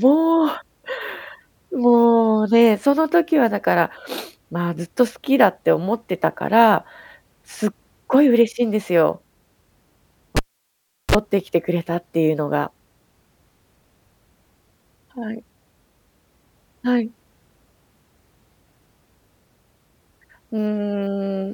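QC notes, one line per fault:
10.37–11.15 s, cable pulled and plugged in: a pop as the live lead breaks contact, 0.73 s of near silence with the path open, a 34 ms burst of 60 Hz mains buzz while only the tip touches, then a second pop as the speech returns.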